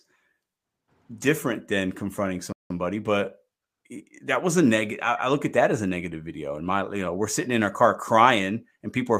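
At about 2.52 s, just after "different than confronting", the speech simply drops out to silence for roughly 176 ms, then picks back up at 2.70 s. That's a playback stall: the gap sits mid-flow rather than at a natural pause, so it reads as a hiccup, not a breath. The likely cause is the player running dry on buffered data, or its audio thread getting blocked briefly, leaving nothing to send to the output until it caught up.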